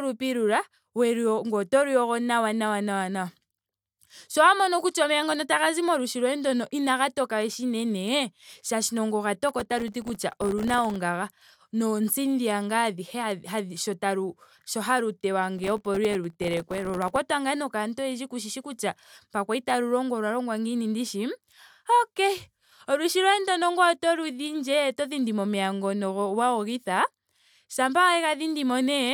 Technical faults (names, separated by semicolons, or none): processor overload crackle